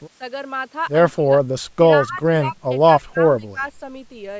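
At 1.13–1.32, 2.02–2.22, 2.45–2.56, 2.99–3.21 and 3.39–3.63 s, the speech dips by roughly 10 to 25 dB, likely speech suppressed in double talk. Unlike dropouts, the level sinks partially rather than falling to clean silence.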